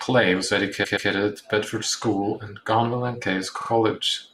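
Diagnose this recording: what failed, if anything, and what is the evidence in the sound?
Repeated frames at the codec or storage stage. From 0.83 to 1.09 s, a 128 ms stretch of the speech plays three times in a row, a stutter that adds 256 ms. At 3.60 to 3.69 s, a shorter 43 ms block repeats the same way, adding about 85 ms. The block lengths fit runs of about six and two compressed frames, written or sent more than once, which the decoder then faithfully played again.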